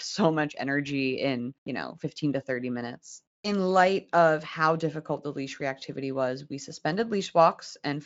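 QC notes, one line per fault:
No faults found; the band tops out near 7.6 kHz, which fits a Speex wideband path at a high setting, and any coding damage is at most faint.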